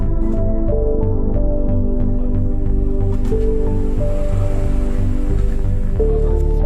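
No technical faults can be heard anywhere in this audio.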